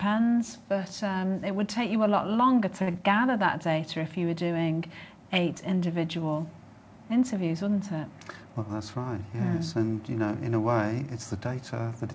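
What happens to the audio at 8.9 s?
At 8.9 s the audio is at the end of a jitter buffer speed-up running from 8.45 to 8.95 s. The receiver trimmed about 70 ms of pitch-period slices to drain excess buffering, so playback runs at 110% speed and sounds hurried while the pitch stays unchanged, unlike a resampling speed-up.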